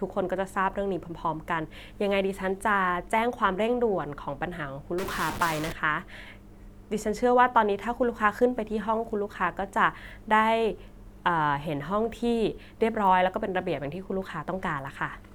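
From 4.98 s to 5.72 s, the speech turns harsh and buzzy. The fault is a stuck bit. The likely cause is one data bit held at a fixed value by a broken line or converter. About half the samples are then off by that bit's weight. Here that step sits around -30 dBFS. The errors follow the waveform, so the distortion grinds along with the signal. It stops at 5.72 s.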